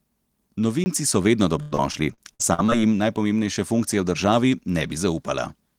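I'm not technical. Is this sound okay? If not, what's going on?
No. There are two separate problems.

At 0.84 to 0.86 s, just before "so vedno", there is a block of digital silence. For 20 ms the audio drops to silence and then comes back, with no fade at either end, so it sounds like a quick tick or tiny hole in the speech. A common cause is the playback or recording software failing to deliver audio in time.

From 1.61 to 2.70 s, right after "so vedno", the speech suffers repeated packet loss, which gives it a robotic sound. The audio was sent in small chunks, and seven times in this stretch a chunk went missing. Each time, the system filled the hole by stretching out the last bit of sound it had, which gives a choppy quality. The longest hole is about 0.1 s, and roughly a quarter of that second is patched-in sound rather than real speech.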